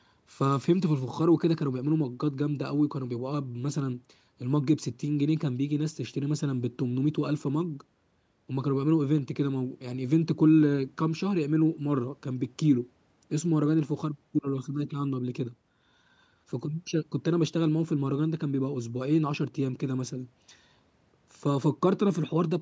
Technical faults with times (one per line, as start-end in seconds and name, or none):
none